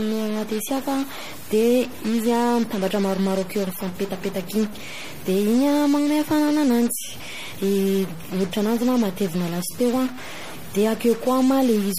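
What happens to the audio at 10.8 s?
At 10.8 s the speech carries a distortion that runs through the whole clip, with gaps filling up with noise. That's likely a stuck bit, where one data bit holds a fixed value and knocks about half the samples off. On top, the sound turns watery and swirly, with nothing above 15.2 kHz and smeared attacks. That's likely MP3 compression at a starved bitrate, something like 40 kbps, dropping weak frequency lines frame by frame.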